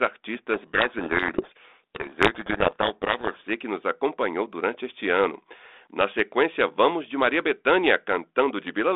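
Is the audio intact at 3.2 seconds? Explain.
No. At 3.2 s you're inside a codec payload misread that runs from 0.54 to 3.48 s. The G.726 code words arrive with their bit order reversed from what the decoder expects, so it rebuilds the wrong differences and the speech gets buried in harsh distortion.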